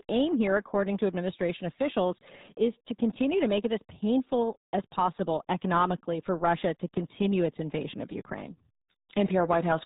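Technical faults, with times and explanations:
Throughout, RealAudio 14.4 codec: heavy coding, consistent with an 8 kbit/s dial-up codec, removes everything above 3.8 kHz, leaving the speech muffled and gargly.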